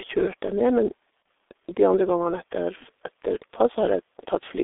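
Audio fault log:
throughout: G.723.1 codec. The sound is held within about 300 Hz to 3.6 kHz, so it is muffled and thin. Heavy coding damage makes it hoarse and blurs consonants. This points to a low-rate codec near 6.3 kbit/s with 30 ms frames.
1.22–1.25 s: VoIP packet loss concealed by the speech codec. A 30 ms gap is filled by the decoder stretching its last pitch and filter at falling gain. It is heard as a brief stretched, fading smear. Its length fits one lost frame.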